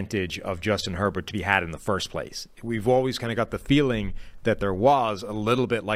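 No technical faults are audible anywhere in the speech recording.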